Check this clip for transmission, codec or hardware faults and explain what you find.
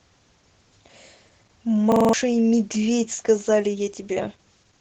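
Two faults turn up: codec damage across the whole clip, and a brief hang loop around the two-second mark.

The speech carries clear Opus voice compression from start to finish. It sounds like the SILK voice coder in wideband mode, so everything above 8 kHz is gone and the top end feels dull. The excitation is coded coarsely too, which gives the voice a muffled, slightly hoarse and faintly robotic edge. That level of damage fits a bitrate somewhere around 12 kbps.

From 1.92 to 2.13 s there's a system hang loop. The machine or driver froze while the sound hardware kept cycling through the same ring buffer, so one piece of audio about 43 ms long repeats exactly five times. At that length it comes across as a rapid stutter at about 23 Hz rather than a smooth buzz. The loop length fits a 2048-sample buffer, and roughly a fifth of a second of real audio is lost under it.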